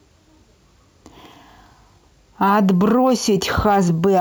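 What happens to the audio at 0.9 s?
A gritty, inharmonic fizz rides on the speech at 0.9 s, as it does throughout the clip, strongest on loud and bright sounds. This is crude rate conversion: samples repeated with no filtering, which fits a 32 kHz to 48 kHz change, leaving an error around 25 dB below the speech.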